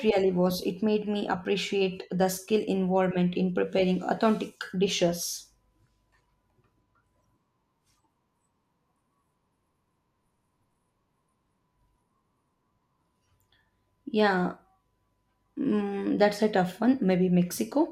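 Nothing stood out as a technical fault on listening to this speech recording.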